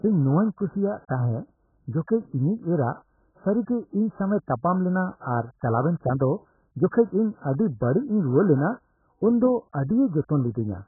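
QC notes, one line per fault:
throughout AAC compression. Nothing reaches above 1.7 kHz, so the speech sounds dull and muffled. Sibilants smear into a warbling fizz. The damage is heavy, likely from AAC-LC starved of bits, which fits a rate near 8 kbps and explains the low cut-off.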